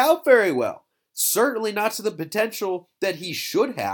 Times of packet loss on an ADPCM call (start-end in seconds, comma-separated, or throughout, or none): none